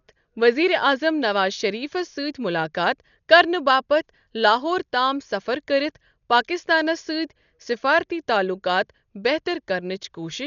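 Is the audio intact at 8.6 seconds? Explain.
No. At 8.6 seconds, as throughout, heavy Dolby Digital compression is likely at work, starved at a rate pointing to about 48 kbps. The encoder narrowed the band and gave many lines no mantissa bits, which the decoder filled with dither noise, so the speech sounds dull, with nothing above 6.9 kHz and rough flutter around tones.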